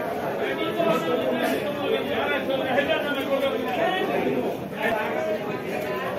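Resampler restarted on every block, throughout: a 25 Hz tick train rides on the signal, as if 40 ms blocks were each converted separately, likely 44.1 kHz to 48 kHz, misjudging every edge.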